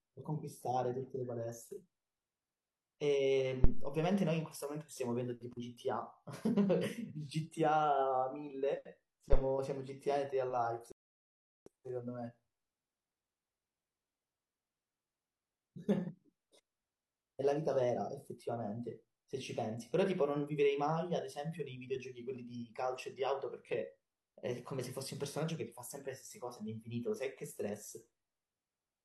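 A speech clip with two phantom power thumps and one rebuffering stall. The first thump runs from 3.64 to 4.00 s. The second runs from 9.33 to 9.42 s. Each is a deep, low thud. The first dies away over about 81 ms, the second over about 19 ms. The cause is a supply being switched on a live input. The sudden voltage step passes through the coupling capacitors and reaches the signal path as a thump. At 10.92 s the audio cuts to silence. It resumes at 11.66 s, exactly where it stopped. This is a rebuffering stall. The player ran out of downloaded audio and waited for more to arrive. Nothing is skipped or lost. The gap simply adds about 0.75 s to the playback, 746.5 ms of dead air inside the speech.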